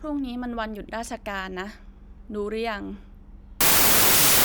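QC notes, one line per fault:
3.61–4.44 s, wrong sample width: the final stretch becomes loud, harsh noise with the speech buried underneath, running at about two-thirds speed with pitch lowered to match. The data are being read with a narrower sample than they were stored with, which fits packed 24-bit samples read as 16-bit. Most values are stitched from mismatched bytes, so only some carry the real signal's top bits. The rest becomes noise, and each stored sample is spread over one and a half read samples.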